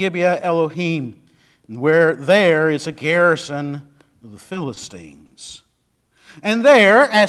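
Short stalls from a late packet occur at 4.74 to 4.78 s and again at 5.26 to 5.32 s. Each time a packet missed its playout slot, the jitter buffer ran dry, and the receiver held the last sound in place for about 20 ms and then 40 ms until the data arrived, picking up exactly where it left off. Nothing is lost, but a sound lingers briefly, with a faint buzz or dip.

A jitter buffer slow-down follows from 5.79 to 6.61 s. The receiver rebuilt its reserve by repeating single pitch periods and fragments of pauses over and over, adding about 57 ms in total. The speech plays at roughly 94% speed with its pitch unchanged, so sounds stretch out and a slight warble can creep in. This all rides on an Opus call path whose band tops out around 12 kHz.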